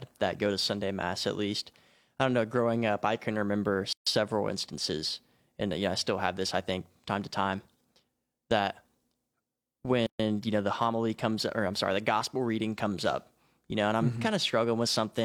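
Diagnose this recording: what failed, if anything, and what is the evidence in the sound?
Separately encoded pieces were joined untrimmed, leaving a gap at a join of encoded pieces: silences with smeared edges of 138 ms at 3.93 s and 130 ms at 10.07 s.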